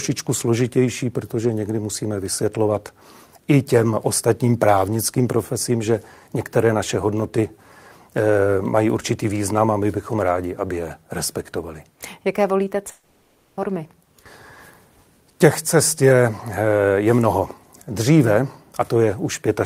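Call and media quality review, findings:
Speech smears into a fading buzz, 12.91–13.60 s, then resumes with a stretch of speech missing. Long network dropout, likely packet loss on the receive path: jitter buffer conceals the gap by extending the last sound, roughly 0.66 s filled, no silence.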